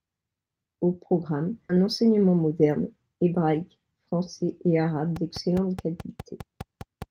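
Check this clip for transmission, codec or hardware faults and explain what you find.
Three faults are audible: a skip ahead, a jitter buffer speed-up and a train of clicks.

At 1.69 to 1.71 s, the speech skips ahead. Nearly half a second is dropped, and the two sides join almost directly, with no gap.

From 1.79 to 3.62 s, a jitter buffer speed-up follows. Short pitch-period pieces are repeatedly removed, about a fifth of a second in total. The speech runs at 112% speed at the same pitch and sounds hurried.

From 5.16 to 7.03 s, a train of clicks runs over the speech. About ten similar pops come at a regular 4.85 per second, peaking roughly 5 dB above the speech. They are likely from electrical interference or a struggling interface.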